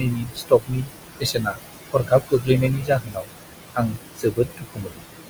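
Noise suppressor artifacts run through the whole clip. The suppressor pulls down the room noise by about 20 dB, band by band, frame by frame. That noise sits only about 8 dB below the speech, so the processing works hard. The background sinks in the gaps and swells back under the speech.

Speech cut by the noise suppressor comes in five spans. The first runs from 0.0 to 0.91 s. The next runs from 1.2 to 1.6 s, then from 1.93 to 2.49 s, then from 2.76 to 3.31 s, and finally from 3.74 to 5.06 s. In each span the suppressor mistakes quiet speech for noise. It drops it by about 16 to 21 dB. Soft consonants and word endings go faint or vanish. The longest loss is roughly a second, in the last span.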